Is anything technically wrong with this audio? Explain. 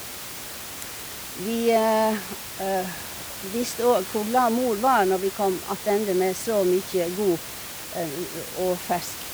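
No, nothing in this speech recording is technically wrong.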